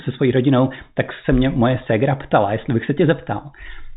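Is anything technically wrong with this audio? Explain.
No, no technical faults here.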